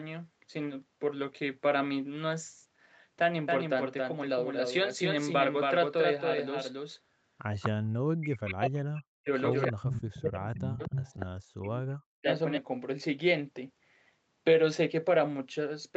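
From 3.48 s to 12.58 s the speech carries a second full-band copy trailing roughly 300 ms behind, about 5 dB quieter, dry and without room colour, switching on and off abruptly. This is a doubled audio track, likely from a second, slower capture path or two out-of-step copies in an edit.

At 7.60 s a brief scrap of voice returns 245 ms late, about 10 dB under the speech. It returns louder, about 5 dB down, from 9.85 to 10.01 s and from 10.60 to 11.26 s. This is echo leak, likely loudspeaker sound that the far end's echo canceller failed to remove and sent back.

Over 7.90 to 9.29 s, 9.67 to 10.97 s and 11.43 to 12.28 s the talker's voice sinks by as much as roughly 40 dB. This is speech suppressed in double talk, likely the echo canceller turning everything down while both sides spoke at once. Throughout, the Opus call path limits the audio to 8 kHz.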